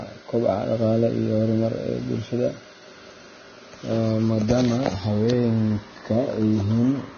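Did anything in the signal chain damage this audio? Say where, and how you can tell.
Yes, at the codec stage. Throughout the clip the speech has no content above about 6.5 kHz, and what treble remains is hissy and grainy, with rough sibilants and softened consonant onsets. This is likely Vorbis compression at a low quality setting, consistent with a bitrate near 20 kbps. The encoder lowered its cut-off and quantised the upper residue so coarsely that fine spectral detail turned into noise of similar energy over the smooth floor.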